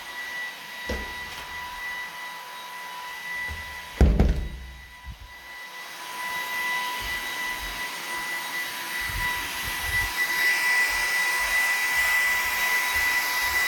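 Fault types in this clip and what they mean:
resampler restarted on every block: each 10 ms block was converted from 48 kHz to 44.1 kHz in isolation, so edge errors form a 100 Hz buzz riding on the signal.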